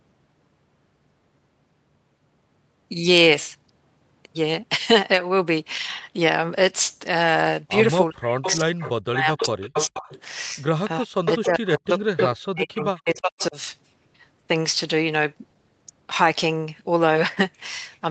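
Speech runs through a call path, and in two stretches, 8.1 to 10.12 s and 10.99 to 13.57 s, it dips deeply, by as much as about 40 dB, and breaks into pieces totalling roughly one and a half and two seconds. This is speech suppressed in double talk, likely from an echo canceller that could not tell the near talker from the far side and turned both down. Unlike packet-loss dropouts, the gaps cluster only where both sides overlap. Inside those stretches an echo leak appears as a delayed copy of the speech, arriving about 0.42 to 0.43 s after the original, at 8.42 to 8.91 s (about 10 dB below the speech), 9.4 to 10.21 s, 11.27 to 11.46 s and 11.98 to 12.36 s (each about 5 dB below), and a brief trace at 13.4 s (about 20 dB below). Room reverberation would give a smooth tail; this is a distinct, late repeat in scraps, which points to a loudspeaker echo that the far end's canceller failed to remove.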